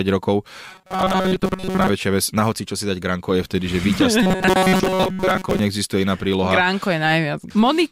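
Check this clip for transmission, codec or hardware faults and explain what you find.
Two stretches of robotic sound from repeated short buffers mar the speech, at 0.69 to 1.89 s and 4.23 to 5.59 s. Audio likely arrived too seldom, so a roughly 5 ms slice was looped over most of each span, forcing a rigid, metallic 188 Hz buzz. A spectrogram shows evenly spaced harmonic stripes, and the waveform shows identical repeating cycles.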